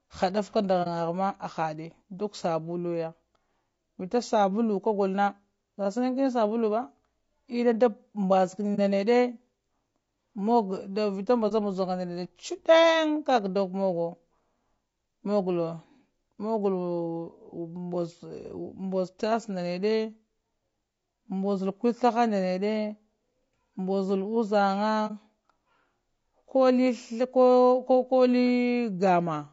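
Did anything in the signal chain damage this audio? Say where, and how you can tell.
Yes. At the codec stage, the speech sounds rough and grainy throughout, with noise filling the gaps between harmonics and a thin, synthetic top band. This is likely low-delay AAC compression (AAC-ELD) starved of bits, fitting about 32 kbps. Its steady spread distinguishes it from intermittent network damage.

On the network or transport side, AAC frame loss with muting leaves brief dips of about 40 ms at 0.83, 8.75, 11.48 and 25.07 s. The decoder zeroes the missing frame, and the overlapping windows fade the sound out and back in.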